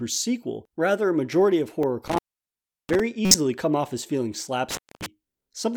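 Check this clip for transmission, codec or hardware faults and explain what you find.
The speech has two kinds of fault: two decoded corrupt frames and two dropouts from an intermittent contact.

Corrupt frame decoded: at 1.83 s, just after "majority of", and from 3.25 to 3.35 s, just before "come off as feeling". The decoder played damaged compressed data, placing energy at the wrong frequencies. The first is a short blip from about one frame near -15 dBFS. The second is a louder burst spanning roughly four frames, peaking near -5 dBFS.

Intermittent contact: from 2.08 to 3.00 s, and from 4.71 to 5.06 s, after "come off as feeling". A loose connection opened the signal path, cutting the sound for 708 ms and then 238 ms. Each gap has crackle at its edges and leaves faint residual hiss.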